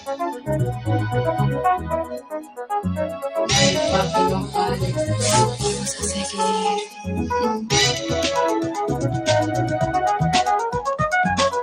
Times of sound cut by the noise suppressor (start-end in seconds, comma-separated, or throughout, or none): 0.32-0.48, 2.04-2.71, 3.09-3.31, 6.85-7.07